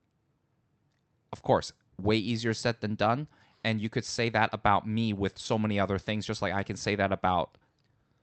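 No technical faults can be heard in this speech recording. It has come through a WebRTC call path whose codec stops the audio at 8 kHz, a top end that fits Opus running at a modest bitrate.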